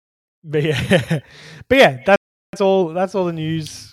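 At 2.16 s the speech just drops out for about 370 ms, until 2.53 s. That's a playback stall: the player most likely ran dry of buffered data or had its thread held up, so the output went silent mid-flow before picking up again. Right after, from 2.53 to 2.89 s, you get time-compressed catch-up. The player is clawing back that backlog by snipping out small chunks and cross-fading the gaps, so the speech runs at double speed but keeps its normal pitch.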